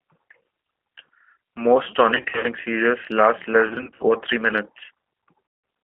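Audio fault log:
Throughout: G.729 codec. The speech sits in a narrow phone band, roughly 250 Hz to 3.5 kHz, and has that plainly audible rough, slightly synthetic edge. That's what you get when an 8 kbit/s coder rebuilds the voice from a vocal tract filter, a pitch predictor and a handful of pulses per frame.
2.15–2.46 s, 3.68–4.05 s, 5.46–5.64 s: VoIP packet loss concealed by the speech codec. About 180 ms of audio goes missing in the first gap, just before "seizures last less". In the second, about 160 ms drops out in runs of up to 60 ms, between "seizures last less" and "or three". The last gap loses about 180 ms near the end. Each time the decoder stretches the last pitch and filter into a buzzy tone or coloured noise that fades, and the voice stays weak for a moment after packets return.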